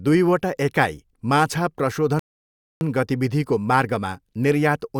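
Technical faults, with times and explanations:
2.19 to 2.81 s, rebuffering stall. The speech drops to silence, then resumes exactly where it stopped. The player ran out of downloaded audio. Nothing is lost, but 0.62 s is added.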